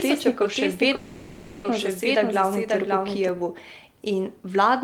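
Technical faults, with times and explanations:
0.00–3.29 s, doubled audio track: A second, likely slower capture path mixes the same speech in again, already running as the clip opens. A full-band copy trails by roughly half a second, about 5 dB quieter, with no room colour, then stops abruptly.
0.95–1.67 s, call audio freeze: Packets were likely held up until the jitter buffer ran empty. For 0.69 s the receiver stretches the last sound into a fading buzz without reaching silence, then the speech resumes where it stopped, now later, with nothing lost.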